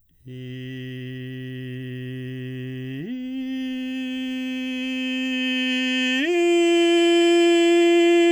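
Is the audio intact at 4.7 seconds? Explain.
Yes, the music plays through 4.7 seconds without any audible dropout, click, distortion or other technical fault.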